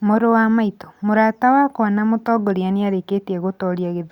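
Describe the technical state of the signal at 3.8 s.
At 3.8 s the speech signal is intact, with no audible technical fault at that moment.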